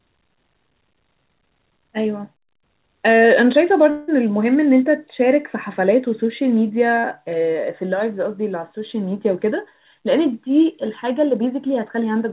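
From 3.9 to 4.10 s, a long network dropout likely left 180 ms of audio undelivered; the receiver continued the last sound as a fading buzz, then resumed past the lost part. From 7.00 to 7.06 s, a short concealed packet loss kept 40 ms from the decoder, and the filled-in continuation of the preceding sound leaves a brief smear.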